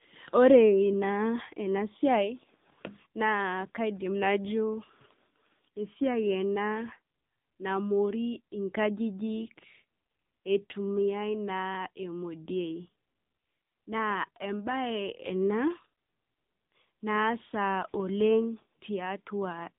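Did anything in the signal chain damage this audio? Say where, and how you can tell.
Yes. The damage is at the codec stage, an AMR narrowband mobile codec, and it runs through the whole clip. Nothing above 3.7 kHz survives, and the low end stops near 150 Hz. The speech sounds plainly buzzy and synthetic. That fits an AMR-NB mode around 7.95 kbps, rebuilding the voice from a vocal-tract model and a few pulses in each 5 ms.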